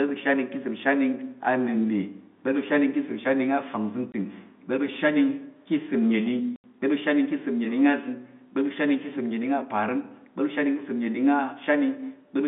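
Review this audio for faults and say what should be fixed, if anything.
Two dropouts from packet loss filled with silence: 4.12–4.14 s (20 ms, fitting one 20 ms packet) and 6.56–6.64 s (80 ms, likely four in a row). They're hard-edged gaps. Turn on packet loss concealment and a jitter buffer so lost frames get interpolated instead of muted. The telephone band, roughly 150 Hz to 3.6 kHz, comes from the G.711 line.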